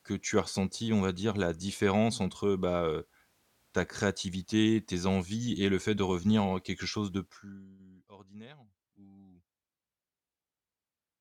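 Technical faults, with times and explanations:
Nothing in the speech stood out as a technical fault on listening.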